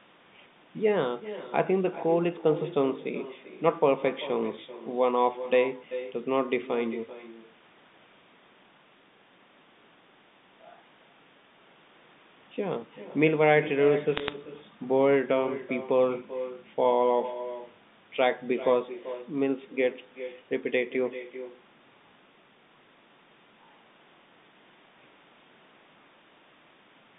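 From start to finish, every phrase is trailed by a fainter, thinner copy of itself arriving around 400 ms later and sitting about 14 dB below the direct speech. This is echo with no canceller: the far end is playing the call through a loudspeaker, its microphone picks that playback up, and nothing removes it before it returns across the network to the talker's side.

Between 14.17 and 14.33 s, a brief burst of sharp ticks and crackle lies on top of the speech, while the speech itself carries on unchanged underneath. These are bit errors on a digital phone line. The call travels as G.711 A-law telephone audio, band-limited to roughly 150 Hz to 3.7 kHz, and here a few bits in every thousand were flipped. Each flip corrupts one sample, and a hit on a high-order bit or on the sign of a loud sample produces a sudden spike that is heard as a click.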